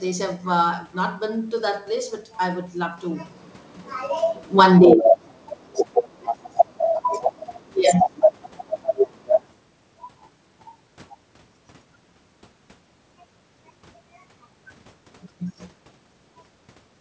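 Speech, passed through a call's microphone processing and codec, with nothing above 8 kHz. At 4.44 s automatic gain falling sets in. The gain control judged the input too loud or its background noise too strong and pulled its level down by about 6 dB until 4.85 s. Voice and room noise sink together, so the drop comes from the processing, not the talker. Then automatic gain rising follows from 4.77 s to 5.29 s. The control now hears the signal as too quiet and lifts it by about 4 dB. Voice and background swell back up together, just after the dip.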